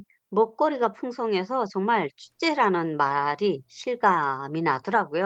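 No technical faults can be heard in this speech recording.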